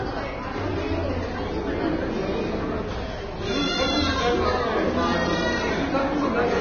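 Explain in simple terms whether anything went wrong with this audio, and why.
Yes, something went wrong. From start to finish the sound is hissy and grainy, and nothing above about 6.5 kHz survives. The likely cause is heavy Vorbis compression. It squeezed the file so hard that fine treble detail became noise and sharp edges blurred.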